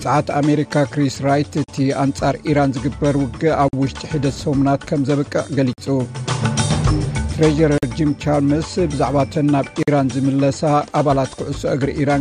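Gaps at joins of encoded pieces fall at 1.64, 3.68, 5.73, 7.78 and 9.83 s, every 2 s, lasting 43 to 48 ms. Separately encoded pieces were joined untrimmed, leaving encoder delay and last-frame padding as silences before the sound resumes.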